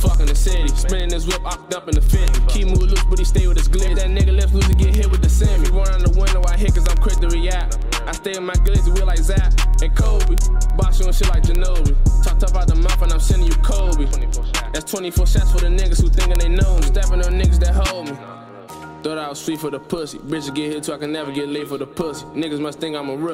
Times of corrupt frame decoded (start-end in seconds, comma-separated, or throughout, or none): none